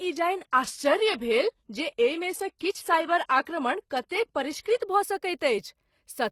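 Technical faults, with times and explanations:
0.00–4.82 s: adaptive stream starting at a low bitrate. Dull, smeared speech with nothing above 12.3 kHz fits 16 kbit/s HE-AAC. Quality then jumps up without a gap.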